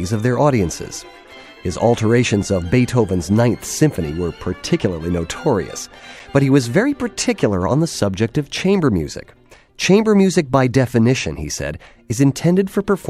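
At 2.43 s and again at 6.19 s the sound drops to a block of digital silence, 2.9 ms then 5.8 ms, lengths that fit 128- and 256-sample buffers left unfilled. Each is heard as a tick rather than a hole: the cut to silence and back has no fade.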